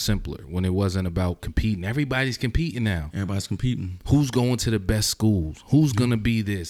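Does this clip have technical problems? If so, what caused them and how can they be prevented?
No technical faults are audible.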